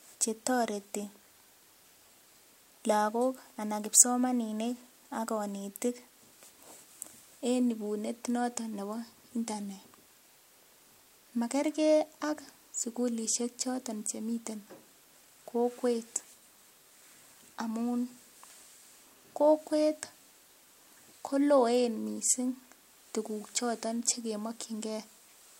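No technical faults can be heard anywhere in the recording.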